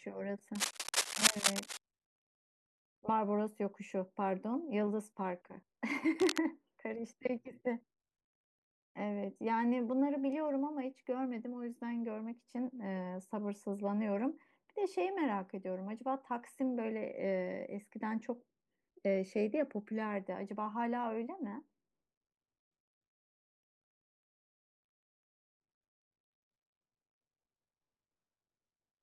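Cable scratch noise sits over this speech from 0.55 to 1.80 s, roughly as loud as the voice, and again from 6.20 to 6.39 s, somewhat quieter. The dense, ragged crackle likely comes from a worn cable or connector shifting, its contact resistance fluctuating rapidly.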